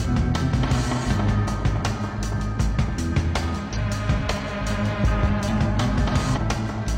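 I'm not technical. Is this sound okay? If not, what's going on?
No. There is damaged data in a compressed stream, at about 3.72 to 3.77 s and 6.32 to 6.38 s in this music. Parts of the stored file are corrupted, so the player misreads those bits and briefly garbles the sound into short blips.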